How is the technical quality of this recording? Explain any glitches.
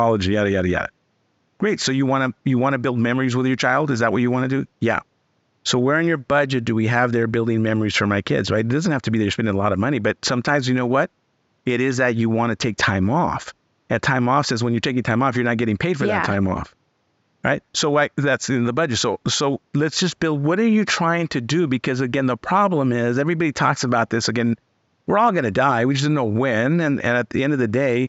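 Nothing here needs explaining, as the speech comes across without any glitches, and the only background is the room's own quiet background noise sitting about 47 dB below the voice.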